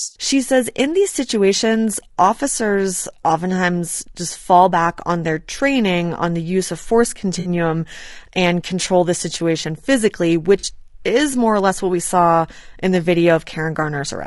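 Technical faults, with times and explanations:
Throughout: low-delay AAC compression. The speech sounds rough and grainy, with noise filling the gaps between harmonics and a thin, synthetic-sounding top band. The likely cause is AAC-ELD. Its short frames resolve pitch poorly, and the damage fits a bitrate near 32 kbps.
1.57 to 1.60 s, 7.39 to 7.49 s, 10.59 to 10.65 s: AAC frame loss with concealment. Each gap becomes a brief smeared, noisy, phasey patch. The decoder rebuilds the missing audio from the last good spectrum. The gaps of about 20, 60 and 40 ms fit one, three and two lost frames.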